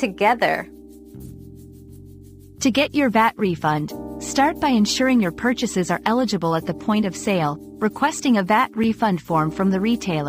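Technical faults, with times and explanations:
Throughout: sample clock jitter. The converter clock wanders by a few microseconds, so each sample lands slightly early or late. The resulting error, roughly 30 dB below the signal, is heard as a fine hiss and roughness that grows on loud, bright passages and disappears in silence.
8.84 s: block of digital silence. About 5 ms of samples drop to silence and then resume, with no fade on either edge. The abrupt steps into and out of silence produce a tick or dip rather than an audible gap. A block this short fits an output buffer that was not filled in time.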